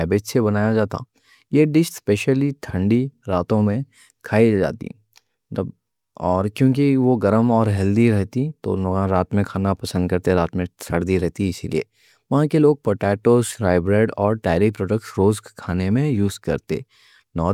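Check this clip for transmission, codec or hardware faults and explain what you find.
Nothing stood out on listening to this speech recording.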